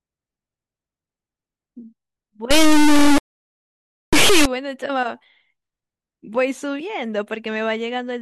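A speech clip that goes badly wrong from 2.51 to 4.45 s: the sound turns into a harsh, extremely loud buzzing square wave, dropping out in quiet bits. That's integer read as float, 32-bit integer samples being interpreted as 32-bit float, so values slam between zero and the clipping limit.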